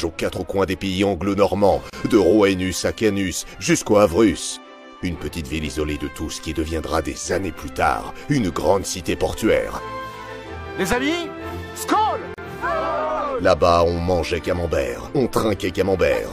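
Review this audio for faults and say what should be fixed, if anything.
Pieces encoded separately were joined with encoder delay and last-frame padding left in. Each gap at a join of encoded pieces opens a silence, at 1.90–1.93 s (31 ms) and 12.34–12.38 s (37 ms). Prevent it by trimming the encoder delay and padding at every join, or by encoding the whole piece in one pass.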